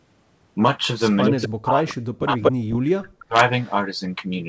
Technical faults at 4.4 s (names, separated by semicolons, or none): none